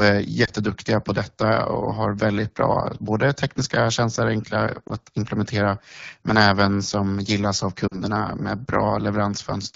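Throughout, the speech carries the rough, raspy texture of the AMR wideband (HD Voice) codec at a low rate. The grain fits 8.85 kbit/s, one of the two lowest modes, where the pulse-driven vocal tract model has too few bits to follow the voice closely. The band above 6.4 kHz is filled with shaped noise rather than real detail. Unlike network damage, this coarseness is steady and present from start to end rather than arriving in bursts.

Lost AMR speech frames break through at three points. The first is a brief dip and warble from 0.45 to 0.50 s, and the second is a similar one from 4.88 to 4.92 s. Each fits a single lost 20 ms frame. The decoder bridges the gap by repeating the last good pitch and vocal tract settings at falling gain. The third, from 7.87 to 8.00 s, is longer and fits about 40 ms lost. The sound smears and sags before recovering weakly. What separates these from plain dropouts is that the gaps never cut to hard silence. 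Instead, the voice's timbre is held and faded.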